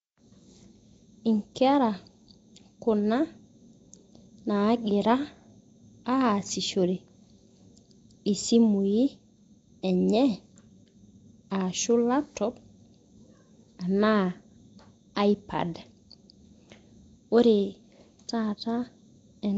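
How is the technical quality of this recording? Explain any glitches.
The speech shows plainly audible codec damage from start to finish, with a rough, hissy halo around the voice and a smeared, underwater quality. Nothing is present above 7.7 kHz. The pattern likely comes from Nellymoser compression (Nellymoser Asao), which fits a rate of about 32 kbps. The codec spends a fixed, small bit budget on each short block. Weaker bands get no bits and are refilled with noise, which produces the hiss and blurring heard here.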